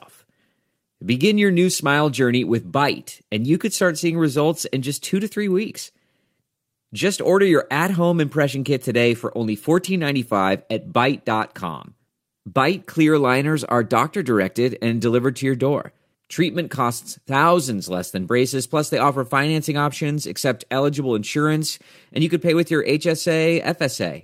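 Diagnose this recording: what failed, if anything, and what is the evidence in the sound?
Nothing failed: no stage shows any fault here.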